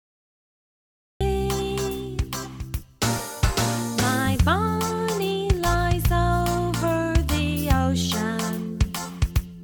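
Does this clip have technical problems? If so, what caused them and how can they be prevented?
Yes. Cut-off start, from 0 to 1.21 s: the first 1.21 s are digital silence, and at 1.21 s the sound begins abruptly partway through, with no natural attack or fade-in. This happens when capture or the stream starts after the sound is already underway, so whatever came before that moment never reached the file. To prevent it, start recording or arm the stream a second or two before the source begins, and keep a short pre-roll buffer.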